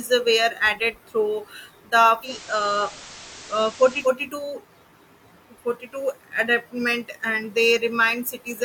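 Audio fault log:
2.21–4.12 s, digital radio blending to analogue: after "added through the", hiss about 20 dB below the signal rises and level shifts about 2 dB as the receiver falls back to FM.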